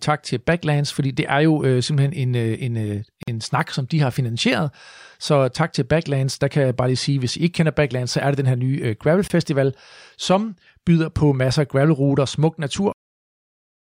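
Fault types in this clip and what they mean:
Gap at a join of encoded pieces: The speech was encoded in separate pieces about 6 s apart and joined without trimming, so each encoder's start-up delay and last-frame padding remain as silence between them. In this clip speech drops out for 47 ms at 3.23 s, between "en øh en øh" and "en snak som de", and for 24 ms at 9.28 s, then resumes where it stopped, with edges softened by the codec.
Cut-off end: The final buffers were never written out, so the recording ends before the speech does. Right after "masser af gravelruter smuk", at 12.92 s, the sound falls straight to digital silence mid-utterance with no natural decay, and that dead silence fills the remaining time of nearly a second.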